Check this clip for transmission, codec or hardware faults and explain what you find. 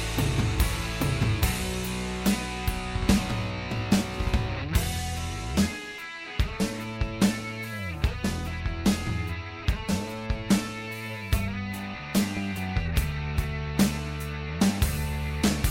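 Nothing here sounds off to me; I can't find anything that points to a problem with how this audio was sent, encoded or recorded.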